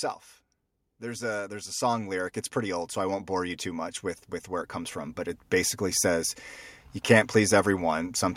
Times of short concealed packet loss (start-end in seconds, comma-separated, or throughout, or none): none